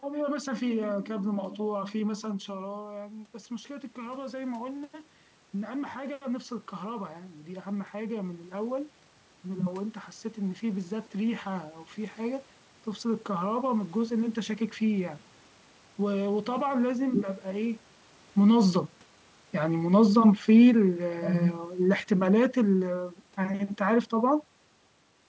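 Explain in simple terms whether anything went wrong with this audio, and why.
Automatic gain rising: from 2.24 to 13.17 s, the gain control slowly lifts voice and room noise together, making up for the talker moving away.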